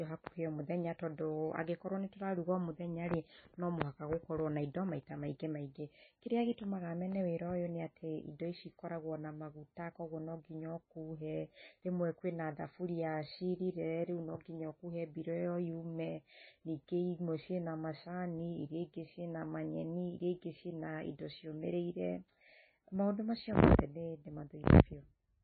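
From start to finish the speech stops dead at 4.6 kHz and swirls with a watery texture, s sounds turning metallic and chirpy. The likely cause is heavy MP3 compression near 16.8 kbps. Weak frequency lines flicker between frames, which a plain low-pass filter would not cause.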